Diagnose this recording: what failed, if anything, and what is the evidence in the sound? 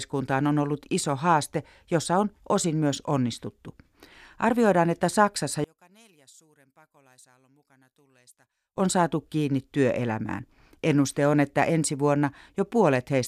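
From 5.64 s to 8.77 s the speech drops by about 34 dB, leaving only a faint residue before full level returns. The likely cause is one channel inverted, a polarity reversal at the analogue wiring stage such as a swapped conductor pair. With one side flipped, material common to both channels cancels on a mono sum, so the centred speech nearly vanishes and only the small difference between the channels remains audible.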